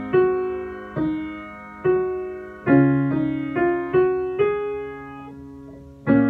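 No technical faults can be heard anywhere in the clip. Nothing in the audio stands out from an engineering point of view.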